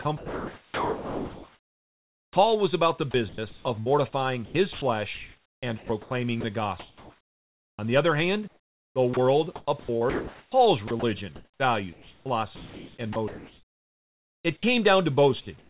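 The sender's voice detector likely kept toggling transmission on and off between 0.02 and 2.36 s, 3.11 and 7.79 s, and 8.48 and 14.63 s, substituting comfort noise for about 2.2, 2.2 and 3.5 s of speech respectively. The result is chopped-up speech: quiet syllables and word edges vanish into a flat hiss.

At 15.41 s the detector likely misjudged a quiet stretch as background and stopped sending. This sound dropped by the voice detector removes about 50 ms of speech, replaced for 60 ms by steady noise, before the signal returns.

From 15.41 s to the end at 15.69 s, discontinuous transmission likely left the receiver generating comfort noise in place of the background. For about 170 ms the natural ambience gives way to a smooth, featureless hiss, all of it capped at 4 kHz by the mu-law telephone codec.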